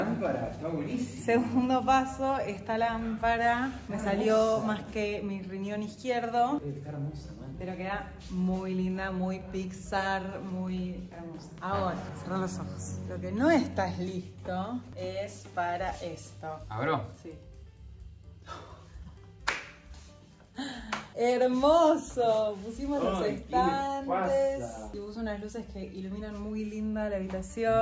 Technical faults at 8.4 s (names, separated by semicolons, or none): none